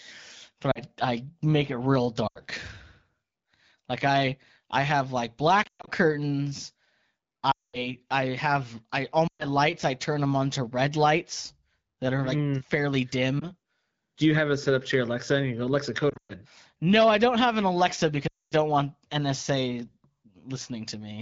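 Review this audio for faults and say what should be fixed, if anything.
Lost AMR speech frames at 0.71–0.80, 2.27–2.40, 5.63–5.89, 7.51–7.86, 9.28–9.45, 13.39–13.47, 16.09–16.33 and 18.27–18.54 s. Radio errors corrupted frames so they failed their checksum. The wideband decoder then repeated its last good pitch and vocal tract settings at falling gain. This gives a brief dip or warble at 13.39 s and a drop to near silence within two frames in the longer gaps.

Improving radio coverage or the link's error protection would keep these frames from being lost.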